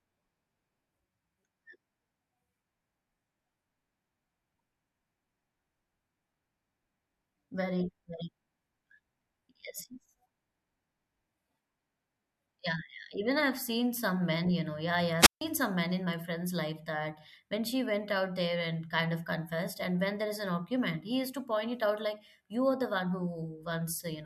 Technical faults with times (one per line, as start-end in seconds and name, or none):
15.19-15.41 wireless microphone squelch dropout